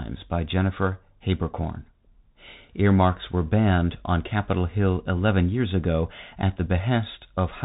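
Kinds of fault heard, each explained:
Bluetooth CVSD headset codec: speech is cut off above 3.8 kHz, with granular hiss and scratchy s sounds that a plain low-pass filter wouldn't add, fitting a 64 kbps stream.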